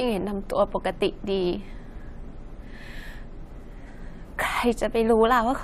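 A speech recording, and there is nothing technically wrong with it.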